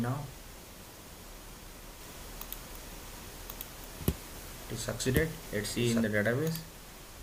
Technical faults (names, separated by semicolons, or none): doubled audio track; frames out of order